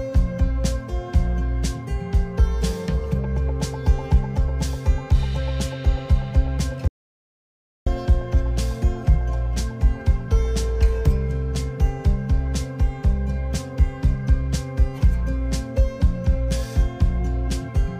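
At 6.88 s the sound cuts off abruptly into silence, with no room tone beneath it, and resumes mid-flow at 7.87 s, roughly a second lost. This audio dropout to silence likely came from the input being briefly lost while the recorder kept writing silence.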